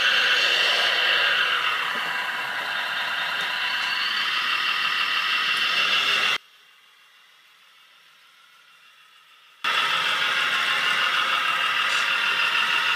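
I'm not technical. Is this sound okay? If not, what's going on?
No. From 6.37 to 9.64 seconds the sound suddenly drops away to almost nothing, leaving only a faint trace before it returns at full strength. The likely cause is one channel inverted: one side of the stereo recording is flipped upside down, so when the two sides are combined into a single channel, everything they share cancels itself out, and only the small differences between the two sides survive.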